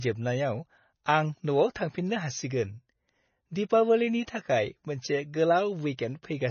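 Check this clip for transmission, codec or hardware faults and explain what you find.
One codec fault runs through the whole speech clip. It is likely MP3 compression, and the damage is heavy. Nothing survives above 6.6 kHz. The starved encoder cut the treble and dropped weak frequency lines frame to frame, which fits a bitrate near 24 kbps. Speech sounds watery, and s sounds chirp and smear.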